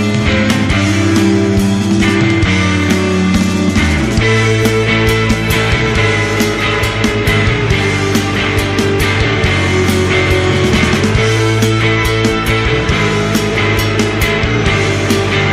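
Nothing is technically wrong with this audio.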